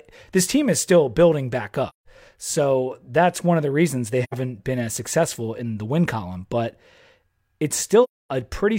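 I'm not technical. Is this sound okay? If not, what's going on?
No. The speech briefly fades to silence three times: after "is still building back" at 1.89 s, after "of the reasons they" at 4.23 s, and at 8.03 s. This is AAC frame loss with muting. Small chunks of the compressed audio went missing, and the player filled each gap with quiet, softly faded in and out.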